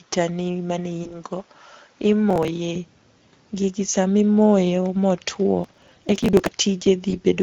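Speex codec damage runs through the whole speech clip and is plainly audible. At 16.8 kbps this CELP coder has too few bits to model the excitation faithfully, so the voice comes through noisy and hoarse.

From the start to 2.76 s the sound is duller and quieter, about 5 dB down, with nothing above 7.6 kHz and its own faint background noise, roughly 40 dB below the speech. At 2.76 s it opens up again with no gap. The likely cause is an input switched to a poorer device: a narrower, different microphone path that then handed back to the normal one.

VoIP packet loss concealed by the speech codec appears from 1.03 to 1.13 s. One 20 ms frame went missing, and the decoder filled it by extending its last pitch and filter at falling gain. The result is a brief stretched, fading smear, and the voice stays weak for a moment after real data resumes.

Processor overload crackle hits from 2.30 to 2.48 s. 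About ten audio buffers, each roughly 10 ms, missed their deadline and were skipped outright. The hard-edged gaps run together into a short gritty tear over the voice.

A longer burst of processor overload crackle follows from 5.64 to 6.49 s. Around seventy skipped buffers of about 10 ms each produce sustained crackling and tearing that stops once the load clears.

A second concealed packet loss falls at 7.10 to 7.15 s. Another single 20 ms frame is lost, leaving a short stretched, fading patch where the decoder extrapolated before recovering.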